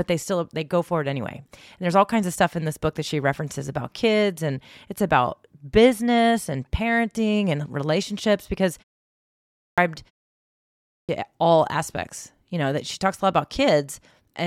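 At 9.16 s, just after "parenting and relationships because", and again at 10.45 s, just before "all aspects", the speech shows a clipped start after a pause. Each follows a short gap of about 0.4 s, during which the output device lets itself sleep. It then needs roughly 0.62 s and 0.64 s to wake, so the speech resumes abruptly out of silence with its opening swallowed. On a waveform, flat silence jumps straight into speech at its normal level with no onset. The spectrogram shows a hard vertical edge where the first sounds are missing.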